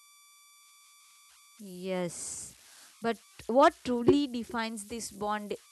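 A speech recording carrying converter idle tones throughout: a whistle near 1 kHz sits in the pauses, and grainy noise lies under the quieter passages, at about 26 dB below the signal. An undithered delta-sigma converter locks into repeating bit patterns at low input levels, producing these offset-dependent tones.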